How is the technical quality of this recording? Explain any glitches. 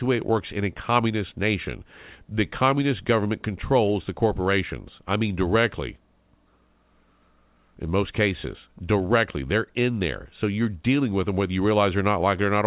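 The technical quality holds up, and there are no glitches to explain.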